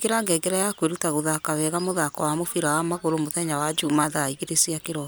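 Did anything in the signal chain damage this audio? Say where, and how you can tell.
No, nothing in the chain audibly damaged this speech.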